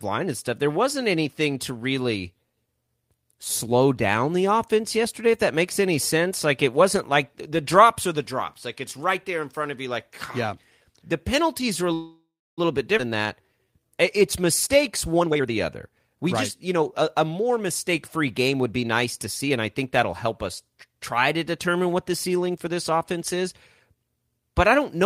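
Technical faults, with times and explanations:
11.93–12.60 s, call audio freeze: after "penalties are a" the sound smears into a fading buzz, then about 300 ms of silence before resuming with nothing lost. This is likely a stalled packet stream emptying the jitter buffer, adding 642 ms of delay. A spectrogram shows frozen, decaying bands followed by a blank gap.
12.98–13.01 s, skip ahead: roughly 300 ms of audio is dropped and both sides are butted together, with only a 12 ms fill. The waveform shows an abrupt splice where the envelope jumps discontinuously.
13.09–15.15 s, jitter buffer slow-down: repeated pitch periods add 178 ms, so the speech plays at 92% speed with unchanged pitch. A spectrogram shows harmonics stretched horizontally with periodic repetition.
15.20–16.27 s and 16.68–20.10 s, jitter buffer speed-up: pitch periods are cut out to shrink the buffer. The first span runs at 130% speed and loses about 300 ms before "right just". 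The second runs at 106% and loses about 200 ms before "help us try to". Both sound hurried at the same pitch, and a spectrogram shows compressed syllables with tiny splice marks.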